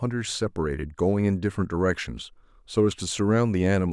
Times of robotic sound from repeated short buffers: none

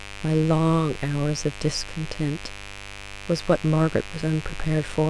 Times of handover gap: none

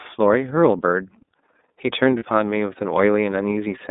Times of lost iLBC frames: 2.19-2.23

